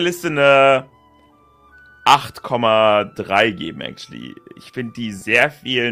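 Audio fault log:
5.19 to 5.23 s, short concealed packet loss: a brief smear lasting about 20 ms, where the sound does not so much stop as blur for an instant before settling back into place. For that fraction of a second no audio reached the decoder in time, so the receiver invented a stand-in by extending the sound that came just before, continuing its pitch or its noisy texture, then blended across into the real signal as it resumed.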